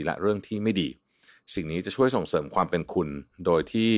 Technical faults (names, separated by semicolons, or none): none